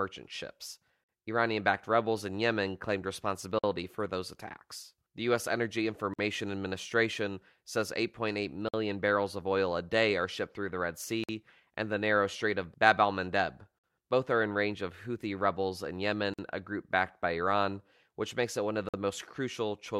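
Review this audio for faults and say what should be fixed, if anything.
The speech has a gap between chunks: a 50 ms hole, repeating every 2.5 s, at 1.04, 3.59 (just before "for those attacks"), 6.14, 8.69 (just before "barrels of oil a"), 11.24, 13.79, 16.34 and 18.89 s (right after "it one of the"). The audio was split into 2.5 s chunks and silence was inserted at each join, so nothing is lost, but the flow stops abruptly eight times.

To prevent it, join chunks sample-accurately by trimming codec padding and scheduling each chunk to start exactly where the previous one ends.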